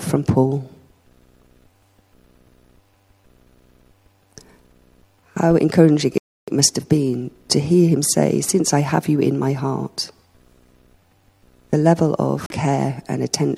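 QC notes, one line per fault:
6.18–6.48 s, playback stall: the sound stops mid-flow and the output is silent for about 0.3 s before resuming. This is likely the player running short of data or its output thread being blocked, so nothing reached the device until it recovered.
12.45–12.52 s, broken MP3 bit reservoir: a brief disturbance of about 70 ms, and the sound jumps forward. This is likely from frames having been dropped. The frames that follow borrow bits from earlier frames and find the wrong bytes, so roughly three 26 ms frames decode wrongly.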